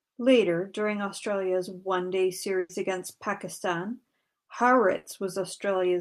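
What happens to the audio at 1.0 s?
Nothing goes wrong at 1.0 s; the speech there plays through intact, with no dropout, click, distortion or other fault.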